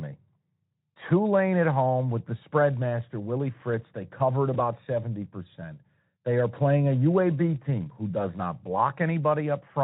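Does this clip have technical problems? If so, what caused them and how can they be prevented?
Yes, one at 4.53 to 4.59 s: VoIP packet loss concealed by the speech codec. A single 20 ms frame went missing, so the decoder stretched its last pitch and filter into a brief buzzy or noisy smear that fades before the sound settles again. Forward error correction or a slightly deeper jitter buffer would prevent it.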